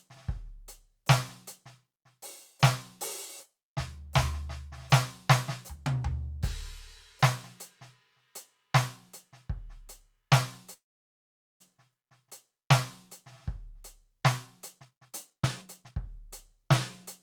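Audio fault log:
10.73–11.62 s, call audio freeze: The music halts and a short tail of the last sound fades into about 0.81 s of silence. It then resumes exactly where it stopped, with nothing lost. Delayed packets likely emptied the jitter buffer, adding a gap.
14.79–16.64 s, jitter buffer speed-up: The music plays at about 132% speed with unchanged pitch, so it sounds hurried and the tempo stops being steady. The receiver trimmed many tiny pitch-period slices, roughly 0.7 s in total, to shrink an overfull buffer.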